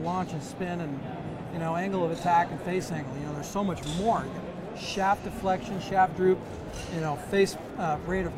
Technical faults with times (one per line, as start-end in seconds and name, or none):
3.07-8.37 Wi-Fi interference